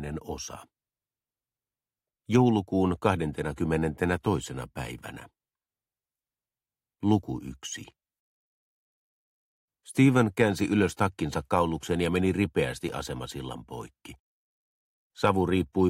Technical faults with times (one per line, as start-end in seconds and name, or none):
12.89 block of digital silence